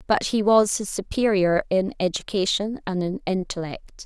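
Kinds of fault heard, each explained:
No faults can be heard in this speech recording.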